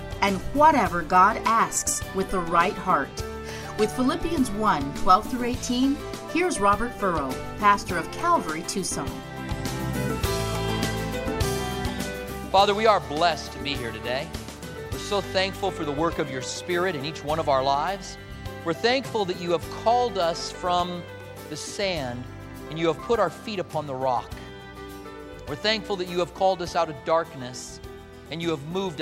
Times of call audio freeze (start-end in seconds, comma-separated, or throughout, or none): none